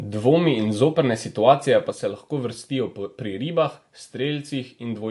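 From start to finish the speech carries MP3 compression damage, plainly audible as a watery, swirling texture on sibilants and smeared consonant onsets. Nothing sounds above 11.3 kHz; on a spectrogram the energy stops at a hard horizontal ceiling there, and the band just below it breaks into flickering patches as weak lines drop in and out frame by frame. The likely cause is a low-bitrate encode, which fits roughly 48 kbps.

At 1.91 s, right after "in zoprne situacije", a sudden gain jump drops the level by about 5 dB in a single step with no ramp, and it stays there to the end. Speech and background hiss fall together, so the noise floor steps down at that instant. On the waveform the envelope narrows abruptly at that point, and a spectrogram shows every band dimming at once along a sharp vertical edge. A likely cause is a gain setting applied instantly rather than faded in.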